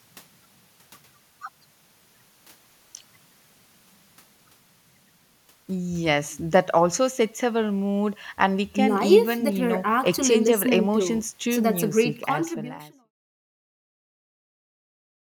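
No technical faults can be heard in this speech.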